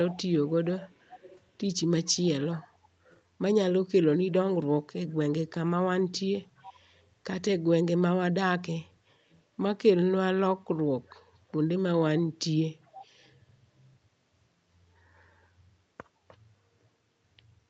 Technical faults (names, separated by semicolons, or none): echo leak